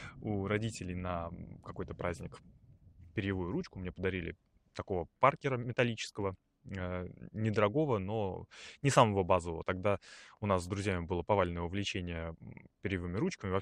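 Speech, with no technical faults to be heard anywhere in the recording. Nothing breaks into or alters the sound at any point.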